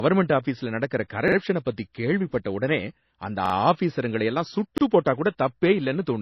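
From the first moment to the last, the speech has no content above 5.8 kHz, so it sounds dull and band-limited despite a high-bitrate file. This is low-bitrate audio saved at a high bitrate: the sound was likely first squeezed through a low-rate MP3 encode, around 24 kbit/s, then re-encoded at 320 kbit/s, which cannot restore what was discarded. On a spectrogram, energy stops at a flat horizontal ceiling near 5.8 kHz across the whole clip.

At 1.28 to 1.37 s, just after "ஆஃபீஸ்ல நடக்கிற" and before "பத்தி கேள்விப்பட்ட உடனே அந்த", a repeated buffer occurs. The device ran short of fresh audio and replayed a 42.67 ms block twice more, which fits a 2048-sample buffer. It is heard as a quick stutter. The waveform shows identical copies of the same shape placed side by side with abrupt joins, and the spectrogram shows thin vertical lines at each seam.

The same fault returns at 3.46 to 3.54 s, after "பத்தி கேள்விப்பட்ட உடனே அந்த" and before "ஆஃபீசருங்கள எல்லாம்", again with two extra plays of the 42.67 ms block. 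At 4.78 to 4.82 s, after "உடனே அந்த ஆஃபீசருங்கள எல்லாம்" and before "போட்டா கூட", the block plays once more, giving a shorter hiccup with a single visible seam.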